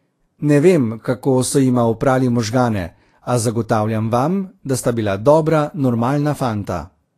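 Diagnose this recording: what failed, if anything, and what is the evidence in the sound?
The codec stage is the failure point. Throughout the speech, treble is hissy and grainy, consonant attacks are blurred, and nothing survives above 14.2 kHz. That fits likely Vorbis compression at a low bitrate, near 33 kbps, where coarse treble quantisation replaces fine detail with noise.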